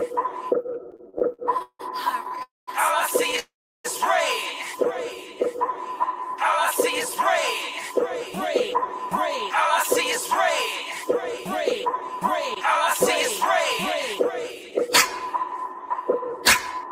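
From 0.91 to 3.39 s, repeated stalls (stutter) break the sound into 15 short halts, the longest 170 ms, each bridged by stretching the last sound. Packets arrived late, so nothing is lost, only dragged.

Within that stretch, at 2.43 to 2.69 s, and again right after it, at 3.39 to 3.86 s, a call audio freeze holds the sound as a fading buzz or hiss that drops to silence for 180 ms and then 340 ms. The likely cause is held-up packets draining the jitter buffer. Unlike the stutter's brief catches, each is one long pause.

From 7.16 to 9.15 s (2% fast, trimming about 40 ms) and 11.06 to 16.88 s (3% fast, about 150 ms), jitter buffer speed-up quickens the sound slightly while keeping its pitch, which distinguishes it from a resampling error.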